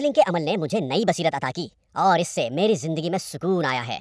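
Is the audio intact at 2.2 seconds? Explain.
No. A wrong sample rate affects 2.2 seconds, as it does the whole clip. The samples play back faster than they were captured, with no rate conversion, so timing and pitch shift together. The speech runs about 1.38 times too fast and sits about 5.5 semitones high, which fits audio recorded at 16 kHz and played at 22 kHz. At 2.2 seconds the speech sounds hurried and high.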